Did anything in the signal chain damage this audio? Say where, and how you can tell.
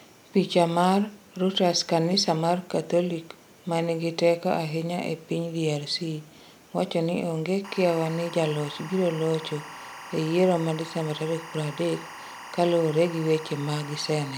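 Yes. Timecode bleed enters in the analogue wiring from 7.64 s to the end: a steady chirping warble around 1 kHz and 2 kHz sits roughly 15 dB below the speech. Linear timecode at 24 frames per second, switching between those two pitches, is leaking in from an adjacent track or cable.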